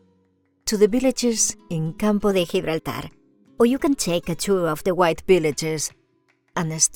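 From 2.31 to 4.99 s there's a wrong sample rate fault: the audio runs about 1.09 times too fast and sits roughly 1.5 semitones sharp, so it sounds rushed and a bit chipmunky. That fits 44.1 kHz material being played out at 48 kHz without conversion.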